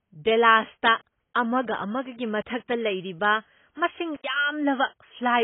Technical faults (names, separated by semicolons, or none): AAC compression; intermittent contact